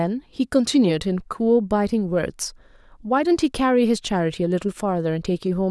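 No technical faults can be heard anywhere in the speech. Nothing in the recording calls for a time stamp or a diagnosis.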